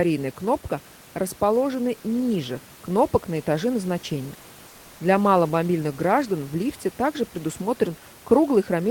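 Comfort noise in place of the background runs from 4.71 to 4.99 s, just after "кнопок на этаже назначения". For about 280 ms the room noise, which sits about 27 dB below the loudest speech, gives way to a smooth, featureless hiss about 1 dB quieter, then the real background returns with the next sound. The likely cause is discontinuous transmission, such as Opus DTX: the sender stopped sending during the pause, and the receiver filled the gap with synthetic noise shaped like the background.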